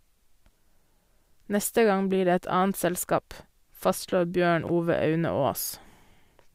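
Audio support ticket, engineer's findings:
Chunks out of order in speech at 4.63–4.69 s and 5.65–5.70 s: brief jumbled stutter. Chunk size 21.33 ms, which fits a 1024-sample buffer at 48 kHz. First block plays two chunks late, second one chunk late. No audio lost, only misordered, giving three hard joins per event. Waveform shows abrupt discontinuities at block edges; spectrogram shows formant tracks that jump back. Probable component: playback or write buffer queue.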